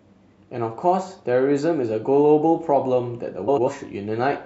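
At 3.47 s, frames out of order garble the speech until 3.68 s. Two neighbouring blocks, each about 93 ms and consistent with four frames apiece, swapped places. The stretch plays with its halves exchanged, a brief flutter. No time is lost.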